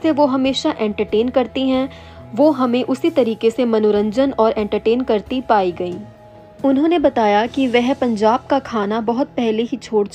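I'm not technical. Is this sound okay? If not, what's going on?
Yes, it sounds fine; nothing here needs fixing.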